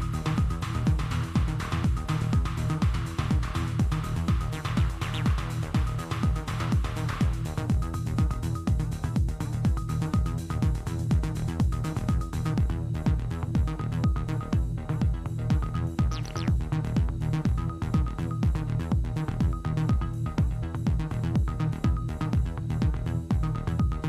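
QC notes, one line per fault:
No faults found. Nothing in the audio calls for a QC entry.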